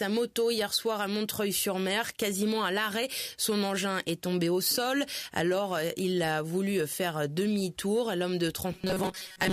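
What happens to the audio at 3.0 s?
Nothing goes wrong at 3.0 s; the audio carries on intact through that moment, with no dropout, click or distortion.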